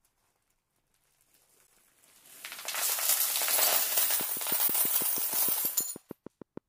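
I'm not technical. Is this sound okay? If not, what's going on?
No. Two things are wrong.

The first is a gap between chunks, heard at 1.67 s and again at 4.68 s. Each is a tiny silent hole, about 12 ms long. The audio seems to have been handled in 3-second pieces, and a sliver of silence was left where two pieces meet. Unlike a dropout, no sound is missing. It just stops briefly at each join, which is why the holes come exactly 3 seconds apart.

The second is a train of clicks from 4.21 s to 6.58 s. It is a steady ticking of about six clicks per second, around fifteen in all, each sounding much the same and standing out above the sound. This is the opposite of the gaps: something is added, not taken away, and the ticking continues through quieter moments. The likely source is electrical interference from nearby equipment or a faulty connection or power supply.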